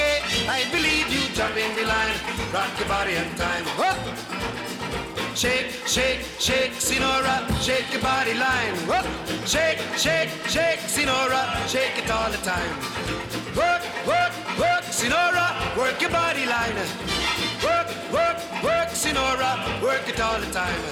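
A block of digital silence appears at 20.07 s: the audio path failed to fill its output buffer in time, or produced invalid values, leaving a 1.33 ms run of zeros, which fits a 64-sample block at 48 kHz. The audio drops abruptly to silence and back, heard as a brief tick.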